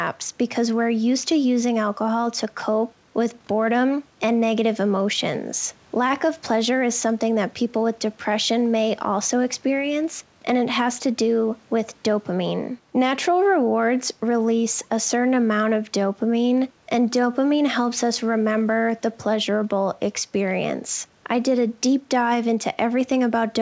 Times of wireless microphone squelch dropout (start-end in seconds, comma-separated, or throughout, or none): none